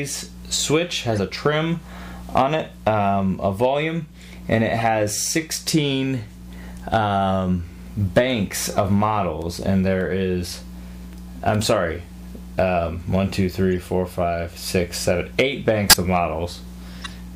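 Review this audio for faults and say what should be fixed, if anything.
There are five bursts of corrupt frame decoded in here: 1.13 to 1.19 s, 4.78 to 4.83 s, a very short one at 13.77 s, 15.90 to 15.96 s, and a longer stretch from 16.93 to 17.13 s. Each one is a handful of compressed frames, and the last hits several. Their bits got flipped, but the decoder played them anyway, so misread gains and codes spray energy into the wrong frequencies for as long as each damaged frame lasts. Most of the bursts reach around -20 dBFS. The 13.77 s one sits lower, near -30 dBFS, and the 15.90 s one is the loud one, up around -5 dBFS.

To fix it, check frame integrity (CRC or checksum) in the transport and conceal or drop bad frames rather than decoding them.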